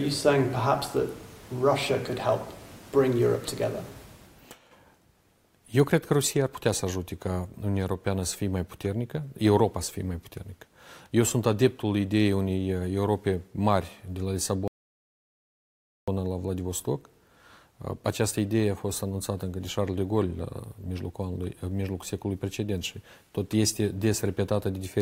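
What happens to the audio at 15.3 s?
A rebuffering stall hits from 14.68 to 16.08 s: the player ran out of downloaded audio, so sound drops to silence for 1.4 s, then resumes exactly where it stopped.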